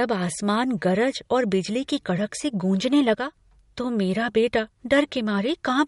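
MP3 compression runs throughout the clip. Nothing reaches above 11.1 kHz, a hard ceiling where the encoder has cut the treble to save bits, and the damage is plainly audible on the speech: a watery, swirling texture as weak frequency lines flicker in and out from frame to frame, with metallic chirps on s sounds and softened attacks. This points to a low bitrate around 48 kbps, likely from MP3 encoding.

One channel drops out from 3.15 to 3.33 s, just after "की कड़क से गूँजने" and ending before "तो मेरा बेटा". For about 0.19 s the level suddenly falls by about 6 dB, then jumps back. This is the drop you hear when one stereo channel goes silent and the mono sum loses half of what both channels shared. Anything carried only in that channel disappears for the duration. The likely cause is a brief loss of one channel in the stereo path.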